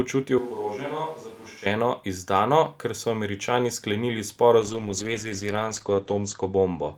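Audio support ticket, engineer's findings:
Switch to a distant microphone, 0.38–1.66 s, ending just before "izdano ker so". Close-mic feed likely dropped, far pickup substituted. Speech turns abruptly roomy and hollow, with thinner bass, level down about 10 dB, and room noise about 25 dB under speech.

Call bitrate drop, 4.6 s to end. Bandwidth estimate fell, so the encoder was forced from 48 to 10 kbps, lowest for 1.88 s, and the band was cut from 20 kHz to 8 kHz. Speech goes coarse, watery and muffled, with no recovery before the clip ends.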